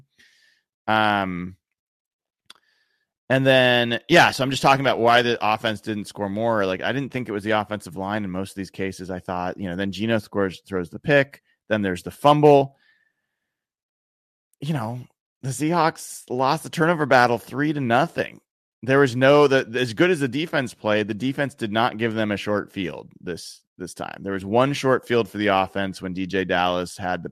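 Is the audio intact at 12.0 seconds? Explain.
Yes, at 12.0 seconds the speech plays through cleanly, with no dropout, click, distortion or other fault to be heard at that moment.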